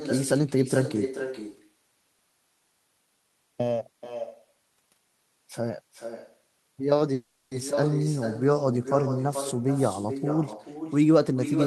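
From start to finish the speech carries an echo with no canceller: every phrase returns roughly four tenths of a second later, about 9 dB below the original, and thinner. The far end is playing the call through a loudspeaker, its microphone picks it up, and nothing subtracts it before it travels back. On a waveform each syllable burst has a smaller twin trailing it. On a spectrogram the harmonic patterns repeat faintly, shifted right by that constant gap.

Between 2.64 and 5.32 s the sound turns hollow and phasey. This is channel delay causing comb filtering. One channel lags the other by roughly a third of a millisecond, and when the two are summed to mono the shared content cancels at evenly spaced frequencies, the first near 1.5 kHz. A spectrogram shows dark horizontal stripes at fixed, regular intervals across that stretch. The waveform's overall envelope barely changes.

At 7.13 s the audio stops moving forward for about 380 ms, ending at 7.53 s. 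The last sound is stretched into a fading buzzy hiss, and then the speech resumes exactly where it left off, with nothing lost but everything after it now later. This is a call audio freeze, likely caused by delayed packets draining the jitter buffer. On a spectrogram the final frame's spectrum smears horizontally and fades. The waveform shows a decaying, featureless fill.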